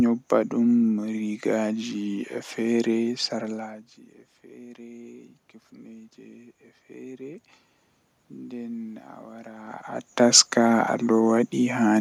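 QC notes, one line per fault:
4.55–7.49 s, automatic gain rising: after the input level falls by about 21 dB, the gain control slowly adds about 5 dB over nearly three seconds, so the voice and the room noise swell together. That shared, gradual rise is what separates it from the talker moving, as heard around 3.5 s and 9.5 s, where the voice level shifts but the background stays steady.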